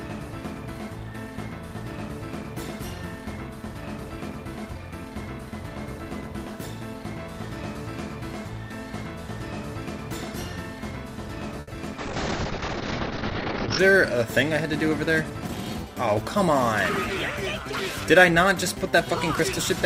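Around 11.60 s there's a short stall from a late packet. A packet came in late, so the jitter buffer ran dry, and the receiver held the last bit of sound for about 70 ms until the packet turned up. Nothing's lost, but the sound hangs a moment too long, and everything after it sits 70 ms later.

Right after, from 11.73 to 11.75 s, you get a short concealed packet loss: about 10 ms never made it to the decoder. The receiver papered over it by extending what came before, so it comes through as a tiny smear or wobble.

Then from 11.99 to 13.85 s there's a call bitrate drop. The encoder got pushed from 48 kbps down to 7 kbps and sat at the bottom for about 1.8 s, and the bandwidth shrank from 20 kHz to 6 kHz. That's why the sound goes muffled and a bit rough until it recovers.

Finally, from 14.56 to 15.59 s, there's a jitter buffer speed-up. The buffer had built up extra delay, so the receiver kept snipping out tiny pitch-period slices, around 70 ms in total. 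Playback runs at about 106% with the pitch unchanged, and it feels slightly hurried.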